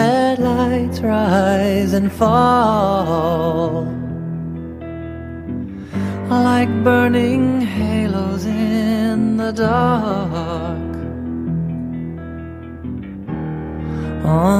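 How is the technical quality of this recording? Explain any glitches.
No glitches or technical faults can be heard here.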